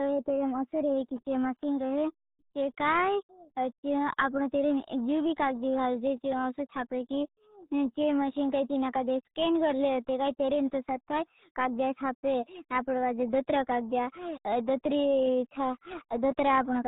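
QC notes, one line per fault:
Throughout: RealAudio 14.4 codec damage, heavy. The speech is muffled and gargly, with nothing passing above about 3.8 kHz, so sibilants and consonant detail are gone and the top end sounds closed off. The gargling comes from the codec squeezing the signal down to 8 kbit/s, a rate built for dial-up modems, where it can only keep a coarse model of the voice's spectral shape and rebuilds the rest poorly.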